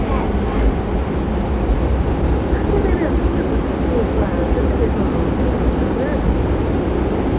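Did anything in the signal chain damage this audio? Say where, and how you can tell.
Yes. At 1.6 s the sound lurches forward with no gap, joining across about 1.5 seconds of missing audio within 0.16 s. This is a skip ahead at the jitter buffer or network stage: an overfull buffer discarded a stretch and cut its delay by roughly that much.

From 3.63 s to 6.81 s the audio runs about 7% fast with its pitch unchanged, sounding hurried. That is a jitter buffer speed-up: the receiver repeatedly trimmed short pitch-period pieces, about 0.2 seconds in total, to drain surplus buffered audio. The call codec is also audible as narrowband G.711 with nothing above 4 kHz.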